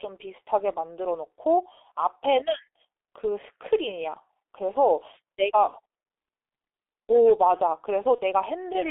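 Throughout the clip the speech sounds muffled and hoarse, with consonants smeared and little energy outside a narrow band from about 300 Hz to 3.6 kHz. This is the G.723.1 codec, heavily damaging the signal: it codes the voice in 30 ms frames at a very low rate, which fits its 6.3 kbit/s mode. Its slowly updated vocal model cannot follow fast changes, so detail is lost.

From 8.15 s to 8.21 s the voice briefly turns into a stretched sound that weakens before normal speech returns. This is VoIP packet loss concealed by the speech codec. The gap is consistent with a single lost 30 ms frame. The decoder filled it by repeating its last pitch and filter with falling gain, and the effect carried into the following frame because each frame depends on the one before it.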